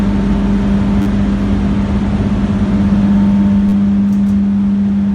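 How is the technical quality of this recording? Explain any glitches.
Two short stutters from a repeated buffer, at 1.02 to 1.06 s and 3.69 to 3.72 s. When fresh audio arrived late, the playback device replayed its last block. The block length fits a 10 ms buffer, looped four and then three extra times. Each stutter is heard as a brief buzz at about 100 repeats per second, and roughly 40 ms and 30 ms of sound go missing. A waveform shows identical 10 ms cycles with hard joins, and a spectrogram shows a short vertical band of evenly spaced striations.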